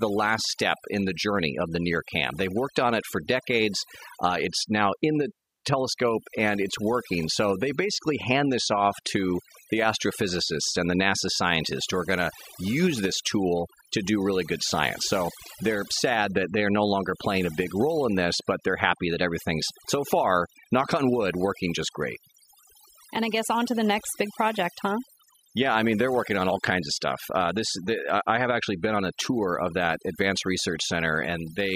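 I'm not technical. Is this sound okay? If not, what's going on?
No. Overdone noise removal affects this speech from start to finish. A noise-cleaning tool was set too strong, so it keeps switching off narrow slices of sound it mistakes for background noise. Quiet parts of the voice get removed along with the noise. The result is an unnaturally quiet background that breaks up into twinkling specks.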